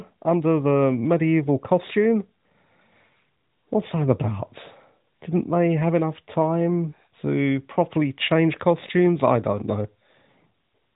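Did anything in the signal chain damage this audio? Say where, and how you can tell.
No, the speech arrives intact through what sounds like the AMR narrowband mobile codec at its highest mode, which fits 12.2 kbps, with nothing reaching above 3.8 kHz and only the light coding character that this rate and band limit bring.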